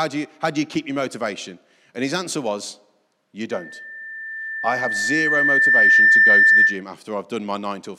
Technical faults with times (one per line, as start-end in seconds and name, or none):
3.50-6.83 loudspeaker feedback squeal